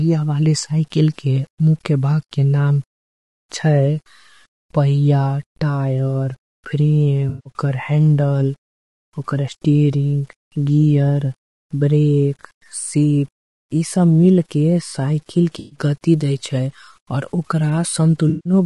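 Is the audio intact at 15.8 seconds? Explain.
No, not quite. AAC frame loss with concealment runs from 15.59 to 15.79 s, ending just before 15.8 s. For about 120 ms the decoder had no valid data and filled the gap by reusing the last good spectrum, with randomised phase and interpolated energy. This span points to a run of several consecutive lost frames. It is heard as a smeared, noisy or phasey patch, after which normal decoding resumes right around the moment asked about.

Low bit depth without dither is also present at 15.8 s, as it is across the whole clip. The sound is coarsely stepped, and the rounding error tracks the signal instead of sitting as steady hiss. It behaves like a grainy distortion only about 40 dB below the speech, harshest on quiet decays. The likely cause is 8-bit truncation with no dither.

Low-delay AAC compression also shapes the audio at this point. The speech sounds rough and grainy, with noise filling the spaces between voice harmonics and a thin, somewhat synthetic top band. 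The damage is plainly audible. Short analysis frames resolve pitch poorly, and at a low rate few bits remain for detail. This points to a likely AAC-ELD encode at about 32 kbps.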